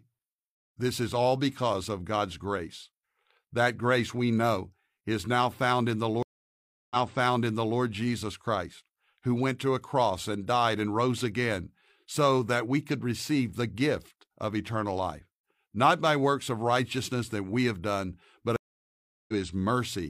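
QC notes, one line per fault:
6.23–7.79 s, stream reconnect: the connection dropped after "now found in the" and a fresh decoder restarted, so about 0.68 s of silence precedes speech resuming 0.88 s earlier, repeating material.
18.56–19.34 s, stream reconnect: the link broke after "we have done but" and the player rejoined the live stream, leaving about 0.72 s of silence before speech resumes roughly half a second later.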